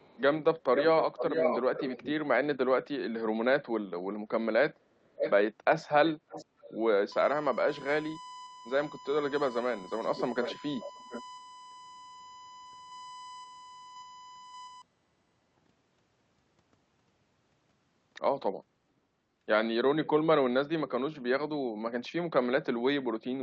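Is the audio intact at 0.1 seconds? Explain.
No. From 0.0 to 0.21 s there is an echo leak: a very faint copy of the speech trailing about 368 ms behind it, likely from a far-end echo canceller letting loudspeaker sound through. Unlike room reverberation, it is a distinct delayed repeat rather than a smooth decay.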